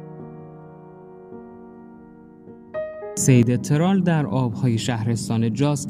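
At 3.43 s a sudden gain jump, likely a gain setting applied without a ramp, drops the sound and its background noise together by about 5 dB until the end.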